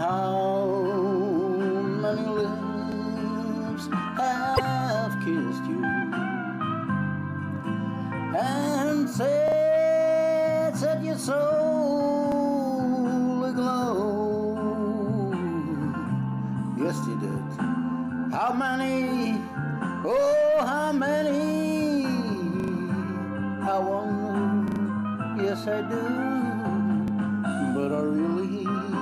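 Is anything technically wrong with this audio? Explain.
Yes, there are two kinds of fault.

Repeated buffer: at 2.92, 9.48, 12.32, 17.32, 22.6, 24.68 and 27.08 s, new audio arrived late and playback looped the last 40 ms block. At most points that block sounds twice. At 9.48 s it sounds three times, and at 22.6 and 24.68 s four times, giving stutters up to 0.12 s long. Each repeat meets the next with a hard edge. Nothing goes missing, so the sound resumes exactly where it stopped, only later. Unlike a packet dropout, this leaves a rhythmic echo rather than a gap.

Broken MP3 bit reservoir: from 4.55 to 4.60 s the audio skips forward and the following few frames come out garbled. This is likely because frames were cut from the stream, so the next frame reached back into its reservoir and decoded bytes that belonged to a different frame. The damaged stretch is about two frames long, and each frame lasts 26.1 ms, which fits 1152-sample MP3 frames at 44.1 kHz. 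What separates it from the stutters is that audio is lost rather than repeated, and there is no regular repeat pattern.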